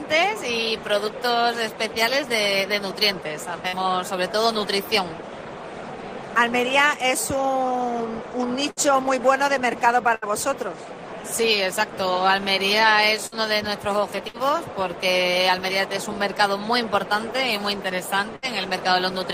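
A burst of packet loss occurs at 3.67, 8.71, 10.15, 13.26, 14.28 and 18.36 s. Each time about 60 ms of audio never arrived. The receiver bridged the gap by extending the last sound and fading it, for roughly 55 to 70 ms, so a voiced sound turns into a brief held buzz and others into a dying hiss. Playback then picks up later, with that stretch gone. At 10.15 s a further 15 ms is also dropped.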